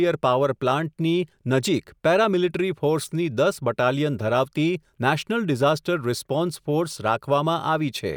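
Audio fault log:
4.98 s, compressed frames skipped: right after "ફોર્સની દસ બટાલિયન ધરાવતી", one compressed frame never reached the output, either missing from the stream or rejected by the decoder as corrupt. Frames here are 32 ms long, so about a single frame's worth of speech, roughly 30 ms, is lost and the sound jumps forward.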